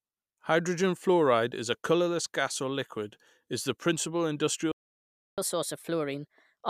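At 4.72 s the speech cuts out in mid-flow. Silence lasts until 5.38 s, about 0.66 s. This is a playback stall. The player likely ran short of data or its thread was held up. Output simply stopped until it recovered.

From 5.38 s to the end, the speech runs fast. This is catch-up at higher speed. The player resamples its backlog at 1.25 times normal speed. Pitch rises with it, by about four semitones. Speech sounds hurried and chipmunk-like until the clip ends.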